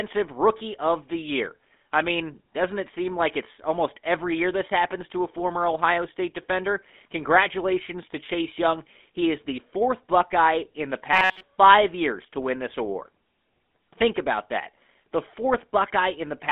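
A speech recording has been passed through the GSM full-rate codec for its whole length. The coder rebuilds the voice from a vocal-tract model driven by a sparse, regularly spaced pulse excitation, and the plainly audible coding damage fits the 13 kbps full-rate scheme. The result is a buzzy, gravelly roughness. The line band runs from about 200 Hz to 3.6 kHz, and nothing above 3.6 kHz survives, so sibilants and brightness are gone. From 11.13 to 11.43 s, between "in the" and "years to win this", the cause is likely audio arriving too seldom, with the playback side repeating a very short buffer of about 5.3 ms to fill the gaps. For roughly 70% of that stretch the sound is a repeated copy rather than new audio. The repetition imposes a fixed 188 Hz buzz, turning the voice into a rigid, metallic robotic buzz that only loosely tracks the speech.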